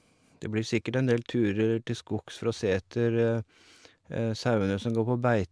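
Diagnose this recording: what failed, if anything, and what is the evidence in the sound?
Nothing in the chain failed: across the whole speech recording, no stage from capture to playback leaves an audible defect to diagnose.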